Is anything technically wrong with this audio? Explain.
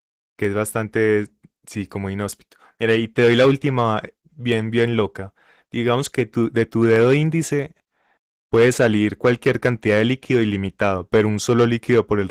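Yes, there are two problems. Throughout, Opus voice compression at what sounds like about 16 kbps in hybrid mode leaves the speech plainly muffled, hoarse and slightly robotic, with SILK coarsely coding the excitation and CELT thinly filling above 8 kHz. At 0.45, 1.82, 4.52 and 6.96 s there are sharp single clicks, likely dropped samples: a fraction of a millisecond is missing, so the waveform jumps discontinuously.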